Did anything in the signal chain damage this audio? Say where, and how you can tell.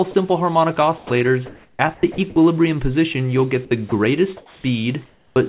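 Yes. At 0.11 to 0.14 s and 0.98 to 1.10 s, sound briefly gives way to steady noise. The likely cause is sound dropped by the voice detector in call processing.

Between 1.46 and 2.36 s and again at 3.65 to 3.92 s, the sound turns choppy. This is likely sound chopped by the voice detector.

At 4.37 to 4.64 s and 5.06 to 5.36 s, the background goes smooth and featureless, about 1 dB and 3 dB quieter. This is likely comfort noise in place of the background.

At 5.34 s, the returning sound starts abruptly, with about 20 ms missing. This is likely an onset clipped by the voice detector during its slow reactivation.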